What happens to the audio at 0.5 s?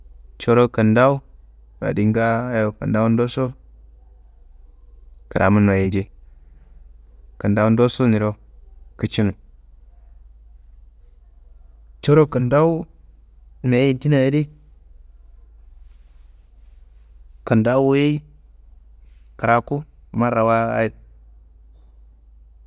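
Nothing goes wrong at 0.5 s; the speech plays through that moment intact, with no dropout, click or distortion.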